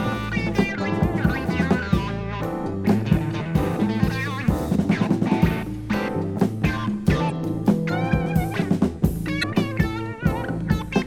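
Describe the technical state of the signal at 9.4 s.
At 9.39 to 9.44 s, damaged data in the compressed stream garbles about 44 ms: the decoder misreads corrupted frames and loses sync until it finds a valid header. The result is a brief chirp, squawk, click or short hole.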